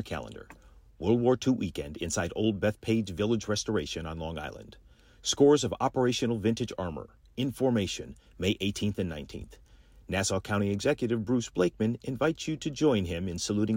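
No audible technical faults present.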